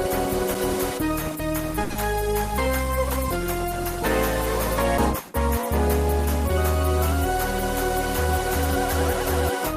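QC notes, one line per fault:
1.84–1.92 s, short stall from a late packet: A packet arrived late, so the jitter buffer ran dry and playback paused for it. The receiver covered the wait by stretching the last sound for about 60 ms, then resumed exactly where it stopped once the packet turned up. Nothing is lost, but that moment is held unnaturally long, with a faint buzzy or dipping quality, and every later moment now plays 60 ms behind where it was.
1.92–1.98 s, short concealed packet loss: Right after the stall, 40 ms of audio never reached the decoder in time and was gone. The receiver invented a replacement by carrying the preceding sound forward, extending its pitch where it was tonal or filling with shaped noise where it was not, then crossfading back into the real signal. The result is a brief smear or wobble.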